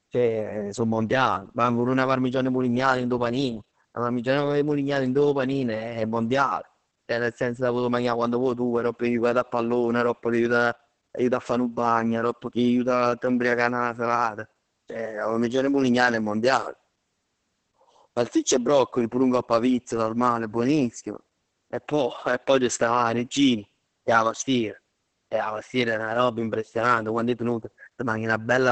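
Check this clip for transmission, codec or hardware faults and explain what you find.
One codec fault runs through the whole clip. From start to end the speech carries heavy Opus voice compression. Nothing reaches above 8.8 kHz, which fits wideband SILK linear-prediction coding at roughly 10 kbps. The excitation is quantised coarsely, so the speech sounds muffled, hoarse and faintly robotic.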